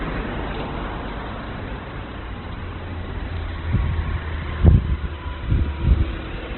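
From start to finish the audio is narrowband, with nothing above 4.1 kHz, and it sounds rough, grainy and noisy rather than swirly. This is heavy Opus compression, likely in its CELT music mode at a rate near 12 kbps, where the encoder keeps each band's energy but fills starved bands with noise or folded copies of lower ones. A spectrogram shows a flat ceiling at 4.1 kHz and smeared, noise-filled texture below it, with few empty holes.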